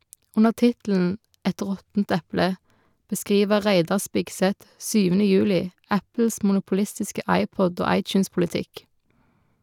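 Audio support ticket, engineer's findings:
No audible faults found in the speech on review; nothing to attribute to any component.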